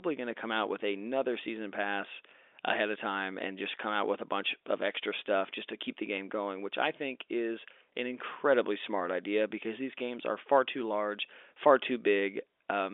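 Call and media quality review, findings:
Nothing stood out on listening to this speech clip, which comes through as ordinary G.711 telephone coding with its narrow phone-line band.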